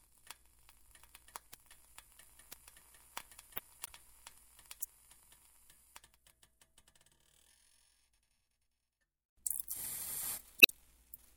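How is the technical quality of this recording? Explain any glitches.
The recording has two kinds of glitch: isolated bit error spikes and two stretches of damaged data in a compressed stream.

Bit error spikes occur at 1.54, 2.53, 3.58, 4.83 and 9.60 s. Each is a single flipped bit affecting one to three samples. The sample value jumps by a power of two and snaps back, giving a sharp, broadband tick unrelated to the surrounding sound.

Damaged data in a compressed stream appears from 3.83 to 3.89 s and from 10.59 to 10.70 s, lasting roughly 56 ms and 114 ms. Corrupted bytes made the decoder misread frames and lose sync while it searched for the next valid header. Each is heard as a chirp, squawk, click or short hole.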